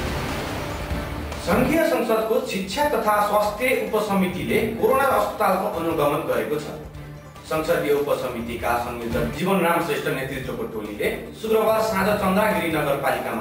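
Imaging from sample-and-hold upsampling runs through the whole clip: a bright metallic fizz between 12 and 24 kHz, about 24 dB below the sound and rising and falling with it. That fits 24 kHz audio raised to 48 kHz by repeating samples without filtering, mirroring the spectrum upward.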